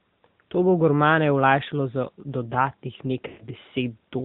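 From the first moment the whole clip has the AMR narrowband mobile codec sound. Everything above 4 kHz is simply gone, so the speech sounds boxed-in and phone-like, and the damage is plainly audible: a buzzy, synthetic edge where the codec rebuilds the voice from a vocal tract model and a few pulses per subframe rather than the real waveform. The level of coarseness fits the 10.2 kbps mode.

Then at 3.28 s, running to about 3.48 s, you get lost AMR speech frames. Around 120 ms of audio went missing, which fits about six frames failing on the radio link. The decoder covers the gap by repeating the last good pitch and vocal tract settings while turning the gain down. So the sound smears and drags out, then fades toward silence before the signal picks back up, a bit weak and rough at first.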